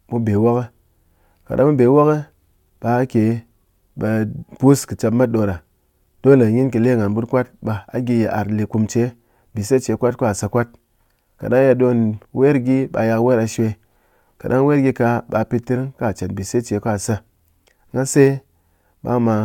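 No technical faults can be heard in this speech recording.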